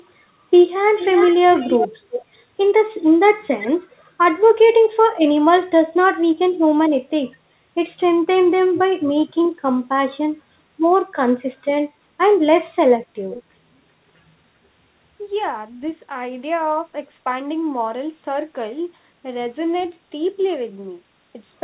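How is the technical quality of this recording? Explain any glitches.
The recording is speech over a call link with two recurring faults, both likely from the far end's echo control, heard through narrowband telephone audio with nothing above 4 kHz, which fits G.711 A-law coding.

Echo leak: A loudspeaker-to-microphone path was likely not fully cancelled, so a copy of the voice returns roughly 375 to 390 ms late. It sits around 10 to 20 dB below the speech, at 0.97–2.21, 3.60–3.68, 8.75–9.33 and 13.31–13.43 s.

Speech suppressed in double talk: When both sides overlap, the echo canceller likely mistook the talker for echo and turned everything down. The voice dips by roughly 15 to 25 dB in brief gaps at 4.88–4.93, 6.17–6.56, 8.76–8.91 and 12.70–12.74 s.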